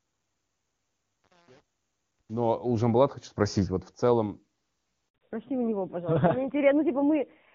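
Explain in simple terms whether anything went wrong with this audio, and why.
Yes, two things went wrong, both about five seconds in. First, the call was handed from one network to another, and for about 60 milliseconds, from 5.09 to 5.15 s, no sound reached the listener. This is a handover gap: the speech cuts out abruptly, leaving a brief hole of silence, and whatever was said in that moment is simply gone rather than blurred.

Second, once the new link came up at 5.15 s, the call did not return to HD Voice. It fell back to an older, lower-quality narrowband codec, which carries nothing above 4 kHz. From that point to the end, the voice loses its crisp, airy top end, so sounds like s and f become harder to tell apart, and the speech turns duller, boxier and rougher compared with the clear wideband sound before the switch.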